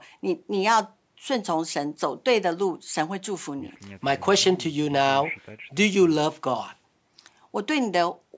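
No faults found in this speech clip; it carries the normal marks of a call's microphone processing, with the lowest bass trimmed and nothing above 8 kHz.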